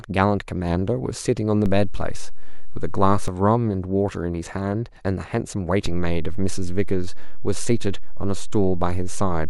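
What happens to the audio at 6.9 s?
At 6.9 s the clip sits inside a DC step that began at 5.86 s and holds until the end. The waveform's zero line jumped by about -16 dBFS, producing a single low thump or click at onset. Unlike hum or rumble, the held offset itself is inaudible, and the speech continues unchanged.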